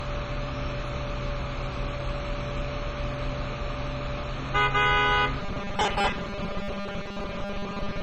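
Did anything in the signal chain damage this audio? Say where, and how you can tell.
Yes. At the codec stage, the whole clip is dull and granular, with gurgling texture. This is likely MP2 compression at a very low bitrate, near 32 kbps. A spectrogram shows a hard ceiling and upper sub-bands flickering on and off.

At the driver or buffer stage, from 5.4 s to the end, the sound turns into a rigid metallic buzz at 200 Hz. This is robotic sound from repeated short buffers, likely 5 ms chunks replayed over most of that stretch. Waveforms show identical repeating cycles, and spectrograms show evenly spaced 200 Hz harmonics.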